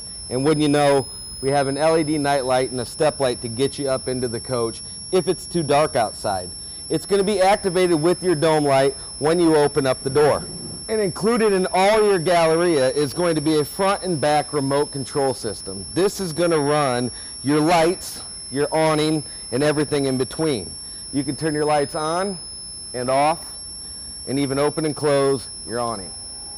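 Switching supply whistle runs throughout: a thin, high tone wandering between about 5.2 and 5.5 kHz, sitting roughly 15 dB below the sound. A switching power supply is cycling in an audible burst mode or beating with another supply, its pitch shifting as the load varies.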